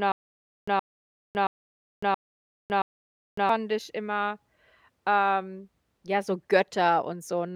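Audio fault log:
0.00–3.49 s, stutter with silent gaps: it's already going when the clip opens. A short burst of speech, about 0.12 s long, keeps coming back every 0.67 s or so, with roughly 0.56 s of dead digital silence in between, five times over before things pick up again at "ich immer". That even rhythm is what you get when playback likely stalls and each retry replays the last fragment, then runs dry, so whatever should have filled those gaps is simply gone.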